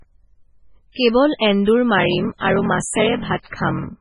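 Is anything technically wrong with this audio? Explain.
Yes. The speech has three technical faults.

MP3 compression runs through the whole clip. The sound is watery and swirly throughout, with heavy codec damage and nothing above 10.5 kHz, which fits a very low bitrate around 16 kbps. The likely cause is an MP3 encoder short of bits. It removes weak frequency components, which then flicker in and out from frame to frame, and it cuts off the treble at a fixed point.

A block size mismatch (padded) starts at 1.96 s and lasts to the end. From there a buzz at 41.7 Hz sits under the speech, and the audio runs slower, at 0.889 times normal speed. One stage writes blocks shorter than the next stage reads, and the remainder of each block is filled with silence. The ratio fits 1024-sample blocks read as about 1152. The repeated gaps produce the buzz and stretch the timing.

Pre-echo occurs at 2.38 to 2.41 s, spreading over 30 ms, and at 3.42 to 3.46 s, spreading over 35 ms. 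In each case a brief hiss comes just before an attack, and the onset sounds smeared. A transform codec spreads its quantisation noise across a whole block. When a sharp attack falls late in the block, noise sized for the loud part leaks into the quiet moment before it.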